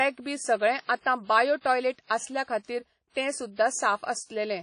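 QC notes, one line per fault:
Throughout, WMA compression: the speech sounds washy and ringing, with hiss that breathes with the signal and nothing above 10.1 kHz. Likely a low-rate transform codec, fitting about 32 kbps, smearing quantisation noise over long blocks and zeroing weak components.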